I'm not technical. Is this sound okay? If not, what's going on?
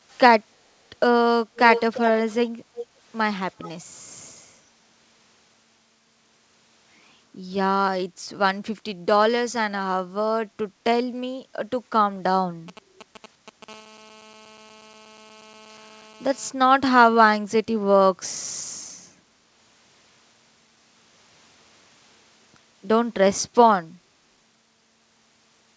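No. The sound has three problems.

From 0.1 to 3.69 s there is an echo leak: a delayed copy of the speech, arriving about 350 ms after the original. It turns up in four scraps, at 0.1 to 0.18 s, 1.55 to 2.49 s, 2.75 to 2.86 s and 3.6 to 3.69 s. The longest scrap, at 1.55 s, is nearly as loud as the speech itself. The likely cause is that one person was on a speakerphone, and the phone's echo cancelling didn't fully stop its microphone from picking up the loudspeaker and sending that sound back.

From 12.68 to 13.64 s you hear GSM signalling bursts: a galloping pattern of short buzzes. An older 2G mobile phone near the recording equipment is briefly talking to the network. The equipment's wiring picks up those radio pulses and turns them into sound.

Straight after that, from 13.68 to 16.5 s, a nearby phone produces a GSM phone buzz. This is a steady, raspy hum at 217 Hz, the rate at which such a phone transmits during a call. 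It has nothing to do with the speech and sits quietly underneath it.

The call connection itself carries nothing above 8 kHz, which is normal for this kind of call.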